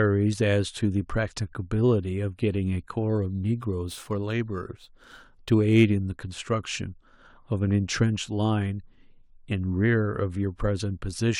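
Crude rate conversion, 3.10 to 5.89 s: samples repeated without filtering, fitting a 44.1 to 48 kHz change, add inharmonic fizz roughly 35 dB under the speech.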